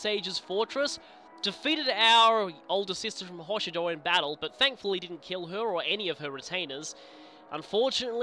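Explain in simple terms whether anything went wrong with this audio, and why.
Nothing went wrong here: the recording comes through with no technical faults to point to.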